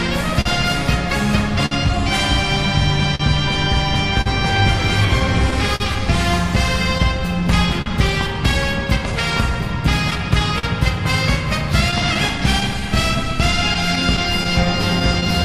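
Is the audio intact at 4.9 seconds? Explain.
No. At 4.9 seconds the sound falls inside a stretch of scattered short gaps that runs from 0.07 to 15.44 s. Around 30 packets went missing or arrived late. The receiver filled each hole by extending the last sound, about half a second in all. The longest patch is about 50 ms, heard as a brief tick, smear or hiccup.

Clock drift between sender and receiver also affects this moment. The sender's clock runs about 4% slow, so the jitter buffer keeps draining. The receiver repeats short pieces to keep playing, and small timing hiccups recur at uneven intervals.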